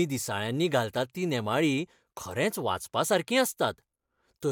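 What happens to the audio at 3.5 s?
Nothing goes wrong at 3.5 s; the speech continues cleanly there, with no dropout, click or distortion.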